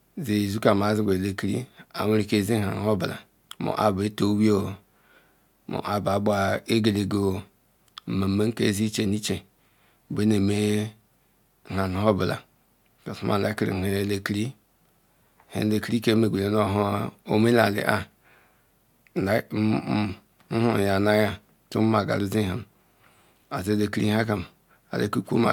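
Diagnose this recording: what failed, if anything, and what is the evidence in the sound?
Nothing in this speech recording points to a failure at any stage of the chain, with no audible event to diagnose.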